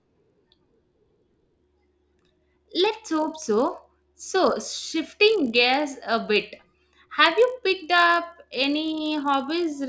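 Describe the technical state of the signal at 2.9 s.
At 2.9 s the resampler restarted on every block. This runs throughout the clip. Each 20 ms block is converted alone, fitting a 48 kHz to 16 kHz step. Edge errors make a 50 Hz buzz under the speech.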